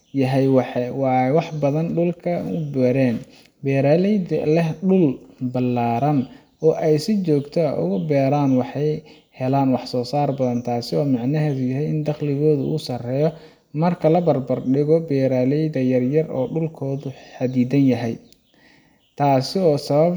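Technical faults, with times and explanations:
No technical faults detected.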